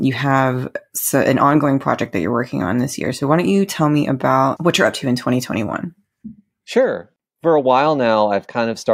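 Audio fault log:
The speech signal shows no audible technical faults anywhere in the recording.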